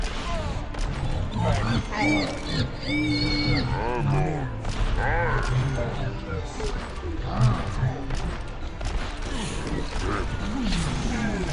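The audio is played back at the wrong sample rate for its whole length, with no conversion, and the two-thirds ratio fits 48 kHz material read out at 32 kHz. Everything runs at 0.667 times normal speed and sits about 7 semitones low, sounding sluggish and deep.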